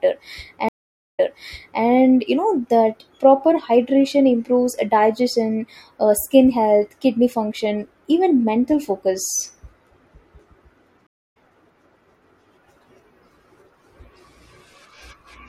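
From 0.69 to 1.83 s there is a stream reconnect. The connection dropped, the player went silent for about 0.5 s, then reconnected and started a fresh decoder partway through the stream. Because the server resent a burst of buffered audio, playback resumes 0.65 s earlier than where it broke off, so the listener hears a short stretch of speech a second time after the gap.

At 10.40 s a small jump in the speech is heard, most likely a dropped buffer (overrun). The application failed to read its samples before the hardware overwrote them, so a few milliseconds of audio were lost and the two sides were joined directly. There is no gap, only a discontinuity that produces a slight skip forward.

From 11.07 to 11.37 s a second stream reconnect occurs. The silence lasts about 0.29 s, and the speech picks up roughly 0.3 s later than where it stopped, so that portion is missing outright rather than repeated.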